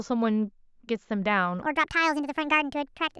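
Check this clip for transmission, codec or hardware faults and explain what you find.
One fault is present. Wrong sample rate, from 1.62 s to the end: the audio is played back faster than it was captured, which fits 16 kHz material run at 24 kHz, so the speech speeds up 1.5 times and rises about seven semitones, sounding high-pitched and hurried.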